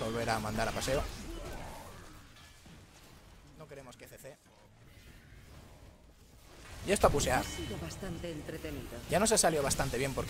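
Nothing stood out as a technical problem when listening to this audio.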